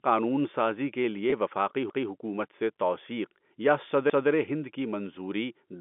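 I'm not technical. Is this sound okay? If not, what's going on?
No. At 1.30 s the speech briefly holds on one slightly buzzy tone for about 20 ms. This is packet loss with pitch repetition: a small piece of the audio never arrived, so the receiving end filled the gap by repeating the last bit of voice.

At 1.90 s and again at 4.10 s, a fifth of a second of speech plays twice, heard as a stutter or jump. This is overlapping chunks: the audio was handled in two-second pieces, and each piece began before the previous one ended.

The narrow, phone-like sound comes from ordinary telephone coding (G.711) and is expected on a phone line.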